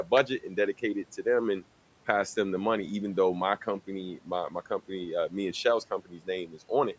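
Speech cut by the noise suppressor at 0.04–0.57 s, just before "dedicate it to them", then at 5.99–6.28 s and 6.47–6.70 s. The suppressor mistook quiet speech for background and pulled it down by about 10–12 dB, leaving faint, swallowed fragments.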